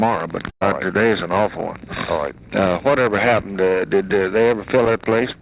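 Right around 0.5 s there's a burst of packet loss that runs to about 0.63 s. A short run of packets went missing, and the receiver patched the hole by stretching the last bit of audio for about 110 ms, fading it down so it ends in roughly 90 ms of silence. When the sound picks back up, about 120 ms of the original has simply been skipped. It's all sitting on a band-limited call path with nothing above 4 kHz, which fits a G.711 mu-law link at 64 kbps.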